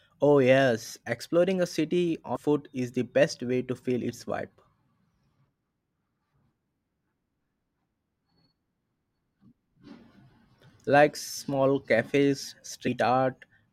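A speech recording with two brief glitches, at 2.35–2.37 s between "yes exploring a city" and "is the best way", and at 12.86–12.88 s just after "small cafes", caused by damaged data in a compressed stream, where the decoder loses frame sync.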